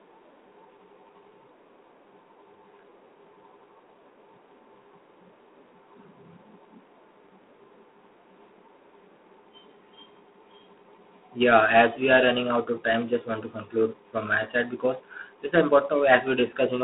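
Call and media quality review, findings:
G.726 ADPCM throughout, coarse difference quantisation consistent with 24 kbit/s: harsh rasping hiss tracking speech level, telephone-band sound, nothing above 3.8 kHz.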